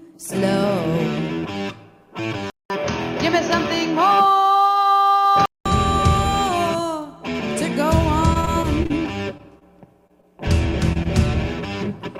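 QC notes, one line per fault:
throughout — sample clock jitter: The converter clock wanders by about 3 microseconds, so each sample lands slightly off time. The timing error is largest where the waveform moves fastest, leaving a fine hiss or grain about 35 dB below the signal that swells on loud, bright passages and disappears in pauses. On a spectrogram a faint haze sits under strong high-frequency content and follows the signal's energy. The waveform shows nothing distinct because the error is too small.
2.50–5.66 s — input switched to a poorer device: At 2.5 s the sound drops out for about 200 ms and comes back dull and boxy, with nothing above 6.6 kHz. It stays that way until the full band returns at 5.66 s. The likely cause is the system changing to a narrower-band input. There is no level jump, but a new noise floor appears about 55 dB down. The spectrogram shows a flat ceiling at 6.6 kHz after a blank vertical strip, and the waveform shows a short flat gap at the switch.
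8.33–8.92 s — repeated packet loss (robotic sound): Over this stretch the audio breaks up again and again. The holes are close together, the longest about 30 ms, and about 80 ms of real sound is gone. The receiver papers over them with about 121 ms of continued sound, roughly a fifth of the span, so the result is choppy. On a spectrogram, smeared, repeated slices alternate with real frames. In the waveform the envelope is stuttering and irregular.
9.38, 9.59, 10.07, 10.21 and 10.93 s — short concealed packet loss: Five brief holes of about 20 ms each never arrived. Each was filled for 14 to 25 ms by carrying on the preceding sound and then blended back in, which gives a quick smear or wobble and can swallow a short transient. On a spectrogram each one is a narrow patch of blurred, copied harmonics or noise. The waveform shows a short, overly smooth section where the detail drops out.
11.03–11.07 s — short stall from a late packet: One packet arrived about 18 ms late, and the jitter buffer ran dry. 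The receiver stretched the last sound for about 18 ms and then resumed exactly where it left off, so nothing is lost, but one moment hangs slightly too long with a slight buzz or dip. On a spectrogram this appears as a brief horizontal streak of held harmonics. The waveform shows a short repeated cycle pattern at that point.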